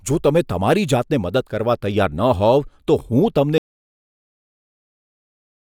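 At 3.58 s the speech cuts out abruptly and the clip stays in digital silence to the end, with no room tone or background noise remaining. This is an audio dropout to silence: the input signal was lost, likely through a disconnected device, a failed link or an accidental mute, while recording carried on writing silence. Nothing after 3.58 s survives, and the cut lands mid-flow rather than at a natural pause.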